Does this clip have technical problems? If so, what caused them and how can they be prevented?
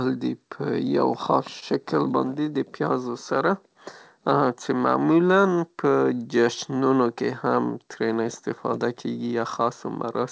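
Yes. At 1.60 to 1.65 s there is a short stall from a late packet. A packet arrived late, the jitter buffer ran dry, and the receiver held the last sound for 20 ms before resuming exactly where it had stopped. Unlike a lost packet, nothing is skipped: the sound is briefly stretched, and everything after it runs 20 ms later. This is heard through a G.722 call path with nothing above 8 kHz. A slightly deeper jitter buffer or steadier network timing would prevent it.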